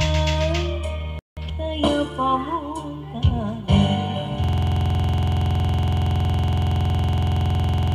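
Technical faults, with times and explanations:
4.44 s to end, system hang loop: the system froze while the hardware replayed one 46.4 ms buffer, which fits 2048 samples, producing a rapid 21.5 Hz stutter.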